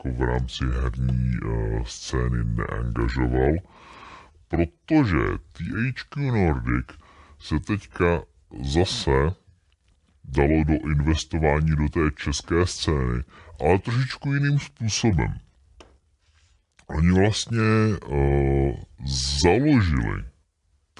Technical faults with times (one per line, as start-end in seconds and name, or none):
0.00-21.00 wrong sample rate